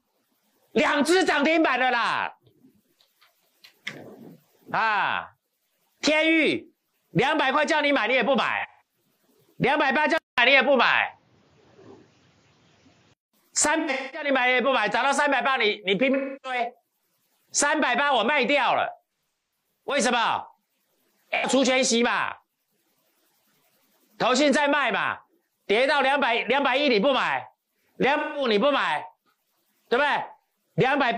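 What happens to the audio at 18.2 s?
Nothing goes wrong at 18.2 s; the audio runs through that moment intact, with no dropout, glitch or other fault.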